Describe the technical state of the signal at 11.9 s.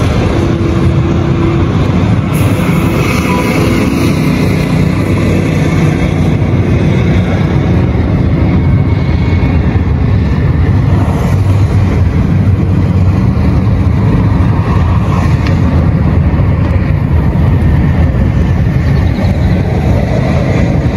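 At 11.9 s the signal shows gain pumping, which runs through the whole clip. The level is likely set far too hot for the microphone, so a fast limiter or compressor clamps down on each loud sound. The swing is around 10 dB. Loud and quiet passages sit unnaturally close in level, and the sound feels squashed.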